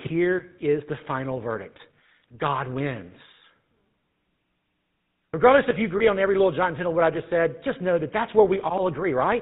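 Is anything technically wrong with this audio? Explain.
Yes. Throughout, the speech carries the buzzy, gravelly roughness of the GSM full-rate codec. The vocal tract is modelled and driven by regularly spaced pulses, and nothing above 4 kHz passes, so the sound is dull as well as rough. The plainly audible damage fits the 13 kbps full-rate coder rather than a generic low-bitrate codec's smeared, watery artefacts.

From 5.98 to 6.01 s, between "if you" and "on every little giant", there are lost GSM frames. The sound points to a single missing 20 ms frame, patched by repeating the last good frame's settings. That gives a brief metallic ring instead of the silent gap or click a plain dropout leaves.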